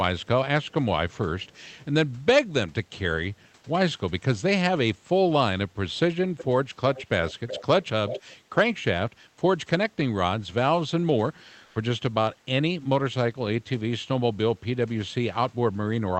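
Echo leak appears at 0.2–0.27, 0.63–0.73 and 1.1–1.85 s, faint at about 40 and 35 dB below the speech, then strongly at 6.37–8.33 s, only about 10 dB down. It is a delayed copy of the speech trailing by about 385 ms, later 371 ms, likely from a loudspeaker path the far end's echo canceller missed. On a spectrogram it shows as a dimmer, time-shifted repeat of the speech harmonics.

At 11.65–11.75 s comfort noise in place of the background swaps 100 ms of real room noise for smooth, featureless hiss, about 4 dB different in level, likely from Opus discontinuous transmission. It looks like a uniform, textureless noise band and a small step in the waveform's noise floor.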